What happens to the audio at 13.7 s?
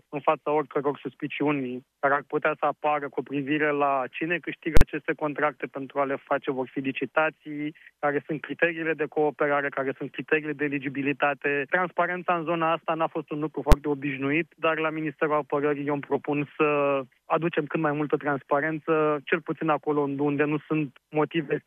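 At 13.72 s, invalid numbers at full scale: a calculation blew up and the output pinned at one extreme value for about 10.67 ms, consistent with a 512-sample block, heard as one bang. The waveform shows a flat bar far beyond the audio's peaks; the spectrogram shows a bright broadband vertical stripe.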